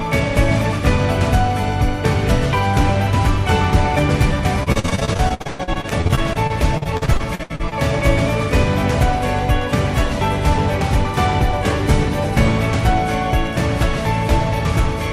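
From 4.63 to 7.73 s there's repeated packet loss: dozens of short holes, up to 118 ms, patched by stretching the last sound, so it turns choppy and robotic.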